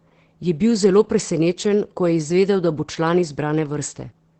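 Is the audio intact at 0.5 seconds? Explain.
No. Opus voice compression affects the whole clip, including 0.5 s. Nothing is heard above 8.6 kHz. The coarse linear-prediction coding, pointing to about 12 kbps, leaves the speech muffled, hoarse and slightly robotic.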